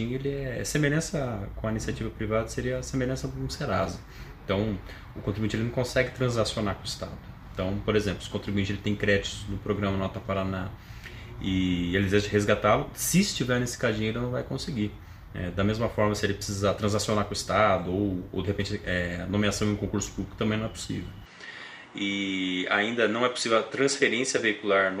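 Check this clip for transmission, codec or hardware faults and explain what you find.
One fault appears, running from 21.26 s to the end. The sound abruptly loses everything above 10.1 kHz and picks up a new background noise about 35 dB below it, with no gap and no level jump. The likely cause is an input switched to a poorer device. A codec bandwidth drop would narrow the band but keep the original noise floor, whereas here the noise itself changes.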